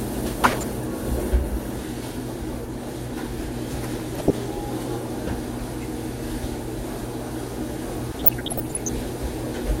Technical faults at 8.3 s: DAB burbling

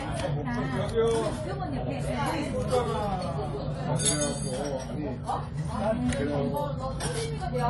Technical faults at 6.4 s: AAC compression

